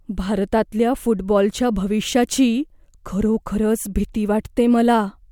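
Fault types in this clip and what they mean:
No technical faults can be heard in this clip. Nothing in the audio calls for an entry here.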